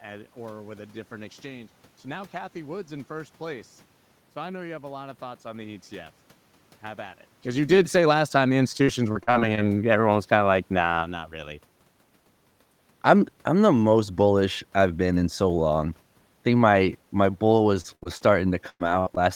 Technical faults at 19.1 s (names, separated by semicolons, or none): burst of packet loss; short concealed packet loss